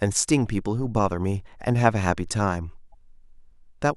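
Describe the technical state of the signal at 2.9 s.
From 2.91 to 2.94 s the speech skips ahead with a brief garbled glitch. This is likely a broken MP3 bit reservoir: after frames were cut, the next frame read stray bytes, and the 30 ms span fits about one 26 ms frame. A clean dropout would leave only silence.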